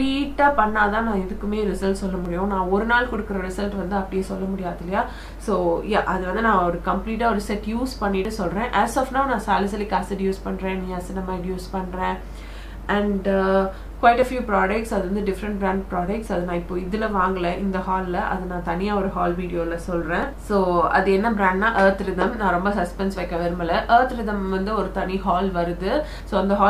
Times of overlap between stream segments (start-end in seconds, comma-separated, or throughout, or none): 2.25, 8.25, 14.22, 20.23